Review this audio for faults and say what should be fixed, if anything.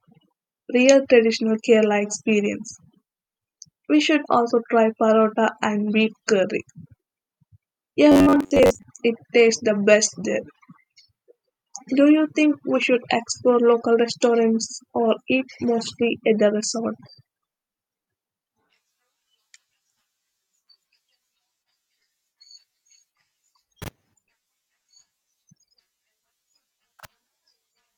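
Robotic sound from repeated short buffers, 8.12 to 8.83 s: a rigid 93.8 Hz buzz, likely from an 11 ms block looping while about half the audio was skipped. To prevent it, enlarge the playback or capture buffer and keep the processing thread from stalling so new audio always arrives in time.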